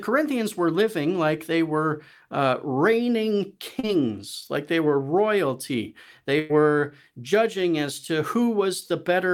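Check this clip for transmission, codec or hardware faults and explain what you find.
Two transmission faults show up in this speech clip, both from packets that didn't arrive in time.

At 3.79 to 3.85 s there's a short concealed packet loss. About 40 ms of the stream never made it to the decoder, and the receiver papered over it with roughly 37 ms of synthesised continuation, extending whatever sound was in progress before sliding back into the real signal. You hear it as a quick smear or wobble.

From 6.39 to 6.51 s there's a burst of packet loss, a bigger hole of about 100 ms. The receiver stretched the last sound across roughly 103 ms, fading it as the gap went on, and there's no actual silence in it. So you get a held buzz or a trailing hiss, depending on what was playing, and then the audio picks up further along with that tenth of a second simply gone.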